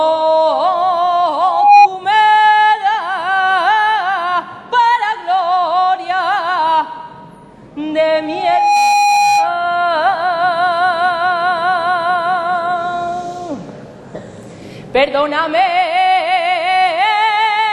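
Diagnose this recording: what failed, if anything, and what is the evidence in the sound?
The failure is loudspeaker feedback squeal in the analogue acoustic loop between a loudspeaker and the microphone feeding it. A steady 821 Hz tone swells up from 1.41 to 1.88 s, building in about a third of a second to roughly 10 dB above the programme. It returns at the same 821 Hz from 8.15 to 9.65 s, rising more slowly, in under a second, to around 5 dB above it. At that frequency the loop gain exceeded unity and the tone fed on itself.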